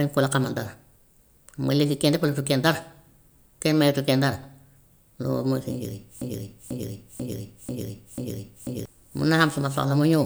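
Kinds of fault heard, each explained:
Broken-record loop: From 6.22 s to 8.86 s, a fragment of the speech about 0.49 s long repeats exactly, back to back, five times. Each pass is identical, so the rhythm turns mechanical and the sense stops moving forward. The likely cause is a player, encoder or stream that stalled and kept putting out the last piece it held. Whatever should have been heard in those 2.6 seconds is gone, not delayed.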